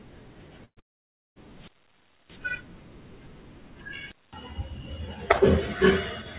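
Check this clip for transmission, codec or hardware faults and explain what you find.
There are three kinds of fault in here, all in the first half and again around four seconds, heard over a narrowband call path with nothing above 4 kHz, which fits G.711 A-law at 64 kbps.

Burst of packet loss, 0.65 to 0.80 s: a short run of audio never arrived, about 120 ms of it. The receiver stretches the last bit of sound to cover the hole, so you hear it smeared and fading out instead of a clean gap.

Long network dropout, 0.80 to 1.39 s: straight after that, the stream goes quiet for roughly 0.57 s. The concealment fades out fast and leaves near silence. The likely cause is the network stalling entirely, and the sound picks back up with that stretch simply missing.

Wireless microphone squelch dropout, 1.50 to 2.48 s and 4.07 to 4.35 s: the radio link weakens, hiss swells, and the receiver's squelch mutes the output for about 0.62 s and then 0.21 s. 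The sound comes back in afterwards.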